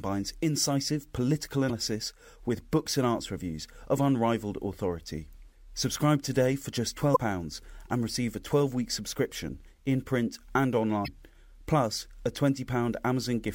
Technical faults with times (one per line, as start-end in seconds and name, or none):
1.66-1.71 damaged data in a compressed stream
7.12-7.17 damaged data in a compressed stream
11.04-11.08 damaged data in a compressed stream